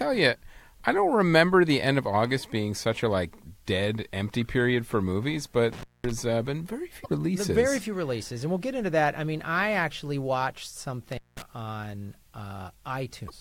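From 5.73 to 6.11 s, an intermittent contact cuts the sound. A loose connection opens for about 0.21 s, with crackle at each edge. From 7.02 to 7.07 s, damaged data in the compressed stream makes the decoder lose sync and search for the next frame header. Another intermittent contact follows from 11.12 to 11.42 s, opening for about 0.20 s with crackle and faint hiss. A second damaged-data fault occurs from 13.26 to 13.31 s.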